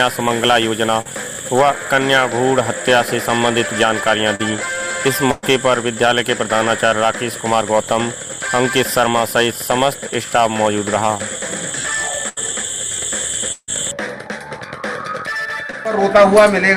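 Around 1.01 s there's a short concealed packet loss: roughly 40 ms of audio didn't arrive in time, and the receiver covered the hole by stretching the last bit of sound for about 38 ms before blending back into the real stream. You hear it as a brief smear or wobble. The same thing happens at 4.35 s, again about 40 ms patched, and once more near 15.71 s, where only about 20 ms went missing.

At 5.31 to 5.45 s it gets worse with a burst of packet loss. About 120 ms in a row never made it, and the concealment carried the previous sound for around 114 ms, fading it as it went, rather than dropping to silence. So you get a held buzz or a fading hiss, and then the audio picks up further along with that stretch simply gone.

From 11.15 to 13.72 s there's repeated packet loss, and it gives a robotic sound. Five separate holes land in that window, adding up to about 260 ms missing, with the longest one around 151 ms. 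Each gets papered over by continuing the last sound, but the next drop arrives before things settle, so roughly a tenth of that span is synthetic fill. That's what makes it choppy, with pieces of the audio missing.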